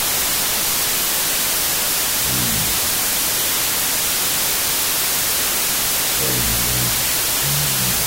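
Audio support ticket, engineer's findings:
Wrong sample width, throughout the clip. Symptom: loud broadband noise over the whole length, speech buried underneath, slowed to half speed and dropped an octave. Probable component: file reader or decoder format setting. Mechanism: samples written as 32-bit integers but read as 16-bit, so each original value splits into two. The upper halves keep a coarse copy of the signal; the lower halves come out as noise. Doubled sample count gives the 0.5x speed.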